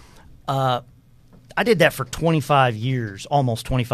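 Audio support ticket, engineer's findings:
No audible faults found in this speech recording.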